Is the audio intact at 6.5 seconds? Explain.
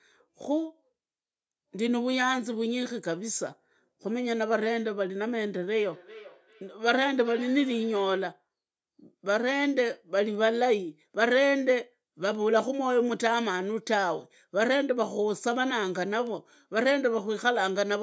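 No. From 5.79 to 8.34 s, feedback echo between two devices makes the sound return roughly every 0.4 s, up to about 19 dB below the speech, showing as fainter, evenly spaced copies on a spectrogram.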